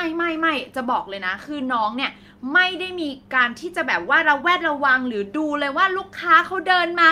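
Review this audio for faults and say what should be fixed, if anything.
No faults; nothing to fix.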